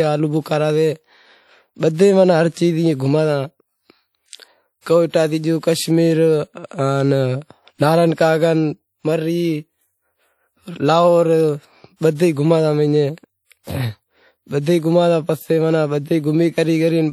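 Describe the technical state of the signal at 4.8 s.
At 4.81 to 4.86 s there is pre-echo: a 52 ms hiss runs ahead of a sharp attack, softening and smearing its onset. The quantisation noise sized for the loud attack spreads back across the quiet start of the transform block. Unlike a click, it blurs the onset instead of adding a separate tick. The speech around it carries plainly audible, ringing, washy coding damage with hiss that breathes with the signal, likely WMA compression at a low rate that fits 48 kbps. Plain band-limiting would only dull the sound, without that breathing.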